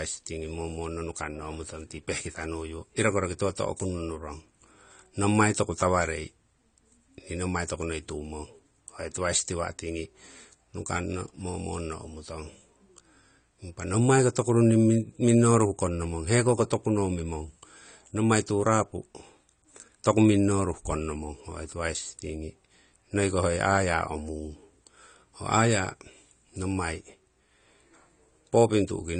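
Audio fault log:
throughout AAC compression: dull, smeared speech with nothing above 9 kHz and a fizzy, warbling texture on sibilants and held sounds. The likely cause is AAC-LC coding at a low rate, which fits a bitrate near 32 kbps, where the encoder lowers its cut-off and starves bands of bits.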